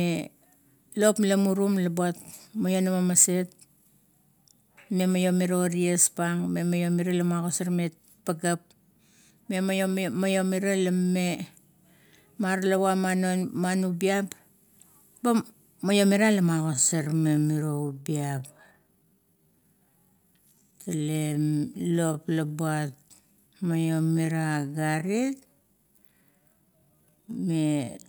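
Speech runs at its natural pace until 16.61 s, where a time-stretched section begins and lasts to the end of the clip. From there the delivery drops abruptly to about 0.62 times normal speed while the pitch stays put, and the slowed audio drags. The likely cause is pitch-preserving stretching software filling a longer slot by repeating short slices of sound. On a spectrogram, harmonic lines hold their frequencies but syllables widen horizontally. The waveform shows elongated envelopes.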